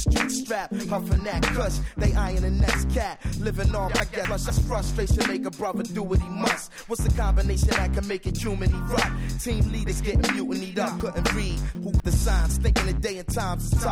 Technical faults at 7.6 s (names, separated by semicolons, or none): none